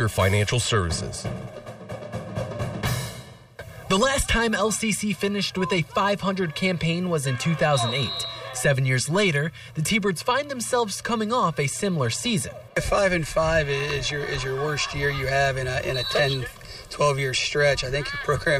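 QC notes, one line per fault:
Nothing stood out on listening.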